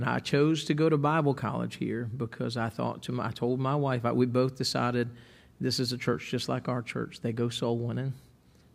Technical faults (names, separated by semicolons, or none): none